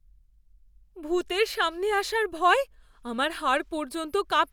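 Nothing here trips up the ear at all, with no fault turning up anywhere in the recording.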